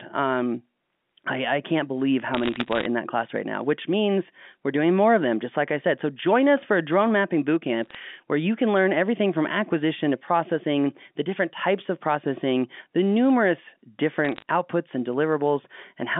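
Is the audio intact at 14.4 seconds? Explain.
No. From 14.25 to 14.42 s, bit errors on a digital phone line flip a few bits in every thousand of the coded samples, each corrupting one sample; hits on high or sign bits give sharp ticks. The waveform shows isolated single-sample spikes; a spectrogram shows thin vertical broadband lines.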